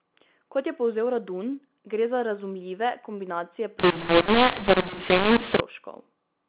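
After "gre za razumljive kombinacije", from 3.79 to 5.60 s, the speech turns harsh and distorted with noise filling pauses: mu-law and A-law mixed up, G.711 mu-law telephone audio decoded as A-law.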